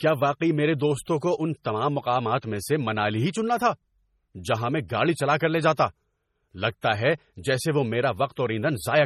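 Throughout, heavy MP3 compression damage, likely from an encode near 32 kbps, makes the speech sound watery. The spectrogram stops at 16.8 kHz and flickers with holes. From 1.63 to 1.65 s, between "کو ان" and "تمام مقامات میں سے", pre-echo spreads a 23 ms hiss ahead of an attack. It shows as noise before the waveform's onset.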